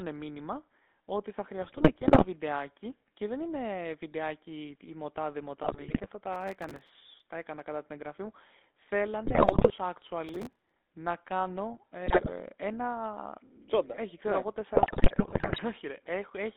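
Throughout, the speech carries the buzzy, gravelly grain of the GSM full-rate codec, which fits the 13 kbps GSM full-rate scheme. The vocal tract is modelled and driven by regularly spaced pulses built from only every third excitation sample, and the band runs from about 250 Hz to 3.6 kHz. Unlike a plain band-limited line, the roughness sits inside the voice itself, a steady rasp rather than mere dullness.

GSM bit errors break in from 1.62 to 2.26 s, 5.62 to 6.13 s, 9.24 to 9.71 s, 12.06 to 12.31 s and, worst and longest, 14.74 to 15.59 s. Corrupted filter, pitch and gain values reach the decoder, so frames come out with a bent spectrum or a sudden level jump. The result is squawks, pops and gargling that follow the speech frame by frame, not a clean dropout.

Processor overload crackle appears from 6.33 to 6.89 s and from 10.29 to 10.71 s. Dozens of buffers of a few milliseconds each miss their deadlines in a row, and each gap is filled with a hard-edged scrap of old audio. 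This produces a fine gritty tearing riding over the speech. It is finer than the coarse squawks of the bit errors, and it stops once the load passes.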